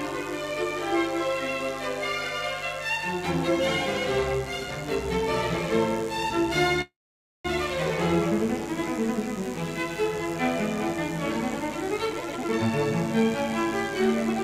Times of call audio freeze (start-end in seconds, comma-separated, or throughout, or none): 6.81-7.46